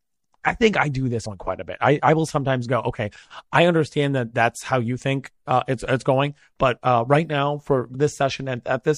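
Across the whole clip the speech has a watery, swirling quality, with dulled treble and smeared consonant attacks. The likely cause is MP3 compression at a low bitrate, consistent with around 64 kbps. What separates this from broadband noise or plain low-pass filtering is the way faint high-frequency detail flickers in and out from moment to moment, so the damage moves instead of sitting as a steady hiss or a fixed dullness.

At 1.24 s, between "I think I do" and "one quite a bit", compressed frames are skipped. About two frames, roughly 50 ms of audio, never play, so the speech jumps forward. A second skip of the same size comes at 7.93 s, just after "uh right now for". Neither leaves a silent gap or a sharp click like a dropout or an edit splice. Each join is a brief smeared blip, because the overlapping MP3 frames on either side blend across the missing stretch.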